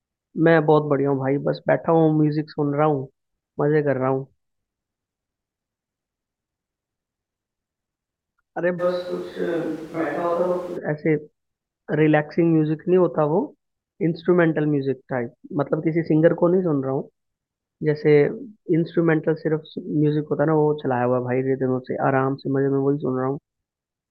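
Switch to a distant microphone in this speech clip, 8.81 to 10.76 s: the voice abruptly turns roomy, thinner and a few decibels quieter, likely because the close microphone dropped out.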